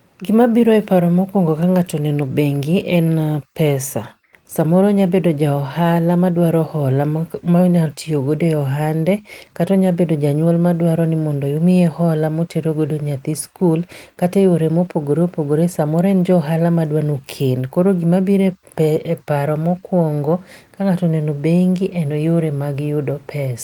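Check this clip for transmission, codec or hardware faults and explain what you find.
Nothing in the speech stood out as a problem on listening.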